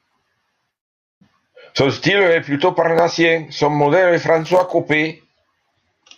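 Nothing stood out as a technical problem on listening to this speech recording.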